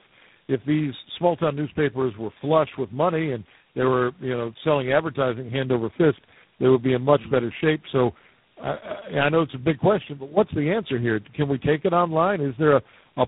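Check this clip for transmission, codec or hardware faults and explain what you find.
Two faults are audible: tandem speech coding throughout the clip and a loudspeaker feedback squeal near the end.

Tandem speech coding runs the whole length. The sound points to three low-rate speech codecs in sequence, probably GSM full rate, G.729A and G.726 with G.711 links between them, each re-encoding the previous decoder's output. Errors accumulate, so the speech is rougher, noisier, more muffled and warbly, with nothing above 3.8 kHz.

The loudspeaker feedback squeal runs from 8.98 to 10.41 s, ending just before "the answer here". A microphone is picking up the loudspeaker it feeds, and at 5.9 kHz the loop gain exceeds one. That single tone swells over about a second to roughly 10 dB above the speech.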